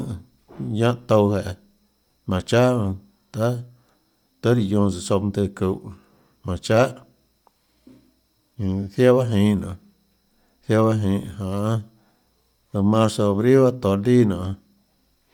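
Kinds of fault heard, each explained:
Bluetooth LC3 compression: The speech has a plainly audible breathy, grainy edge throughout. This likely comes from LC3 coding around 48 kbps in 10 ms frames, with content reaching about 20.2 kHz.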